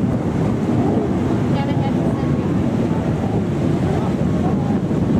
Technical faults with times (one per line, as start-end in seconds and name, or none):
none